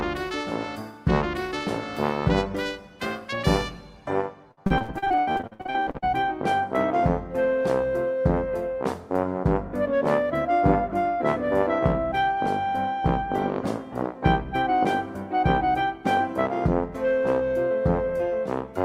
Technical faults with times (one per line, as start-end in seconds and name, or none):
4.51-6.04 repeated packet loss (robotic sound)